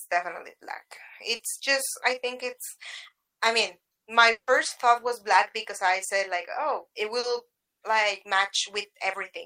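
At 1.35 s and again at 7.19 s, short concealed packet loss leaves a brief smear lasting about 40 ms, patched by extending the preceding sound and blending back without any audible gap. From 4.31 to 4.50 s the sound stretches into a fading buzz or hiss and then drops to silence for about 90 ms before resuming, likely a long network dropout.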